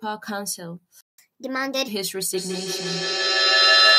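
At 1.01 s the speech just drops out, and the audio stays silent until 1.18 s, a gap of roughly 174 ms. That's a playback stall. The player likely ran dry of data or had its thread held up, so nothing reached the output for that stretch. You just get a hard hole in the middle of the flow.

Straight after that, from 1.18 to 1.88 s, the player does a catch-up at higher speed. It's working through the backlog by resampling at 1.25 times normal rate, so the speech runs noticeably quicker and the pitch jumps up by around four semitones, giving it a slightly chipmunky lift. At 1.88 s, with the lost time made up, both speed and pitch settle back to normal.

From 2.33 s to the end there's feedback echo between two devices. A second device in the same room is playing back what this microphone sends, and the mic picks it up again. The echo canceller here only knows about its own speaker, so that path gets through. 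Each bit of speech comes round again at a steady interval of about 150 ms, and each pass sounds thinner and more ringing. The loop is hot enough that the repeats stack up instead of fading, peaking about 11 dB above the speech itself.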